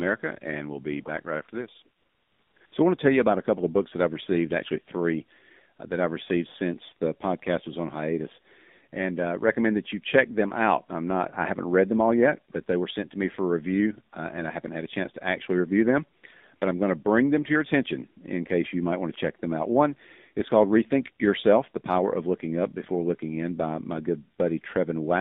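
The whole thing is speech squeezed through the AMR narrowband mobile codec, AMR-NB. The band runs only from about 200 Hz to 3.7 kHz, so there's no air or sparkle at the top and a thin bottom end. The codec damage is plainly audible: a buzzy, synthetic edge to the voice, the sound of a vocal-tract model rebuilding speech from very few bits. That fits one of the lower modes, around 7.4 kbps.

On top of that there's AMR comfort noise, where the phone decided nobody was talking, stopped sending speech frames, and the far end filled the gap with generated hiss. Right after "back right after this" you get the longest patch, from 1.98 to 2.56 s, a good 580 ms of smooth, even noise standing in for the real background. Two short flickers follow, at 2.58 to 2.60 s and 2.66 to 2.72 s, so the background seems to switch in and out. Later, after "to actually review them", it happens twice more, briefly at 16.20 to 16.24 s and again at 16.56 to 16.62 s, just before "I'm going to bring".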